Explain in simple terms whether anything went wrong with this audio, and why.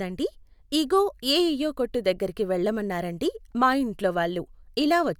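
Nothing went wrong with this speech recording. At no moment does anything stand out as a technical problem.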